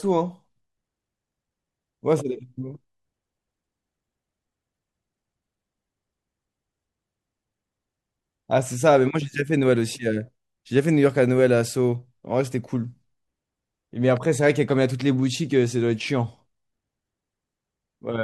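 No technical faults can be heard anywhere in the recording; the signal stays continuous and stable throughout.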